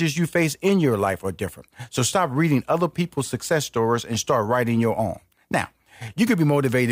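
DAB burbling at 1.49 to 1.60 s after "in your life are", at 3.97 to 4.23 s between "reading other people's success" and "writing your own", and at 6.08 s. Weak reception lets bit errors of around 0.1 to 0.2 percent past the error correction into the MP2 data, where corrupted samples put short blips of noise into single sub-bands over the speech and corrupted scale factors make sub-bands jump in level.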